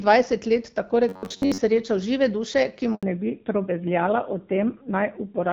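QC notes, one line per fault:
1.09–1.60 s, robotic sound from repeated short buffers: Audio likely reached the playback stage too slowly, so a short fragment was looped to fill most of this stretch while the real speech was skipped. The loop period imposes a rigid 93.8 Hz buzz, which fits a buffer of roughly 10.7 ms, and the voice turns metallic and machine-like.
2.95–3.03 s, handover gap: The call switched networks and no speech frames arrived during the changeover. The voice drops out abruptly into 80 ms of silence until the new link carries audio again, and whatever was said in that moment is lost.
3.03 s to end, fallback to narrowband: After the handover the call fell back from the wideband HD Voice codec to an older narrowband one, which points to AMR-NB at a rate near 7.4 kbit/s. Nothing above 4 kHz remains, so the speech sounds duller and rougher than the earlier wideband portion.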